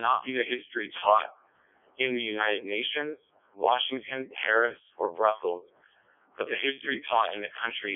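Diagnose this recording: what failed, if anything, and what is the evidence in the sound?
Codec 2 vocoder throughout, at the codec stage: buzzy, robotic speech from sine-wave resynthesis, limited to 300 Hz to 3.5 kHz, with heavy damage that fits its 0.7 kbit/s mode.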